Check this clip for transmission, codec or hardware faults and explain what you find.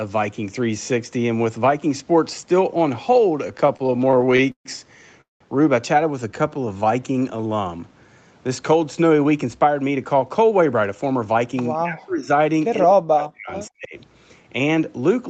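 Yes, the speech shows several network and echo-control faults between 3.5 and 14 s, with the audio band ending at 8 kHz, as expected for the Opus call path.

Repeated stalls (stutter), 3.47–4.68 s: packets arrived late, so the jitter buffer kept running dry and the receiver stretched the last sound across 16 gaps (335 ms in total, the longest 137 ms). Nothing is lost, but the speech drags and stutters. On a spectrogram this shows as smeared, frozen vertical slices.

Call audio freeze, 5.21–5.43 s: the likely cause is packets held up in transit, which emptied the buffer for 193 ms. The last sound is carried on and fades to about 160 ms of silence, then the speech resumes intact. The waveform shows a decaying tail followed by a flat gap.

Jitter buffer slow-down, 6.11–7.37 s: to rebuild its reserve, the receiver repeated pitch periods, adding 144 ms and playing at 89% speed. Pitch stays the same, but sounds are drawn out. 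Harmonics on a spectrogram look stretched horizontally.

Jitter buffer speed-up, 9.25–11.61 s: with excess audio queued, the receiver trimmed short pitch-period pieces, about a fifth of a second in total, running at 110% speed. The pitch is unchanged, but the speech sounds hurried. Syllables appear compressed in time on the spectrogram.

Speech suppressed in double talk, 11.75–12.29 s, 12.79–13.51 s and 13.70–13.95 s: the likely cause is an echo canceller turning down speech while both sides talked. Level drops by as much as about 40 dB, so the speech dips and cuts out in pieces. The waveform shows sharply notched envelopes.

Echo leak, 13.22–13.26 s: a brief copy of the speech returns 168 ms late, about 15 dB below it, likely because the echo canceller let residual loudspeaker pickup through. A spectrogram shows a faint duplicate of the preceding pattern, shifted in time.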